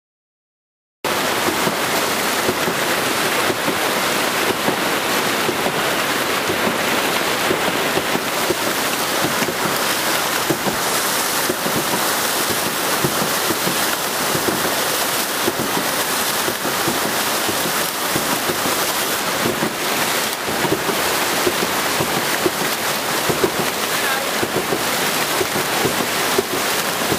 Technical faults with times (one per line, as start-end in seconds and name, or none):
6.65-7.98 train of clicks